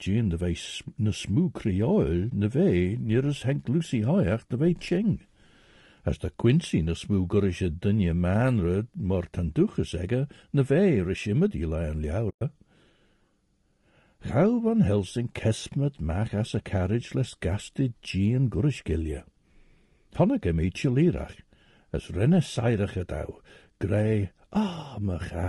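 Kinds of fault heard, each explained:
Low-delay AAC compression: The speech throughout sounds rough and grainy, with a noise floor filling the gaps between voice harmonics and a thin, synthetic-sounding top band. The likely cause is a low-delay AAC codec such as AAC-ELD, whose very short frames resolve pitch harmonics poorly. The damage fits a low bitrate of around 32 kbps. On a spectrogram the harmonic stripes look smeared, with speckled energy between them and a patchy, blocky upper region.
AAC frame loss with muting: Whole coded frames are missing, and the decoder outputs silence in their place. Overlapping windows fade the sound down and back up, giving soft-edged gaps. A brief hole at 2.30 to 2.32 s, between "vei ne smú creol" and "ne vei nir as", fits one 20 ms frame. A longer one, 12.29 to 12.42 s, fits six frames. Waveforms show tapered dips to silence, and spectrograms show clean vertical gaps across all frequencies.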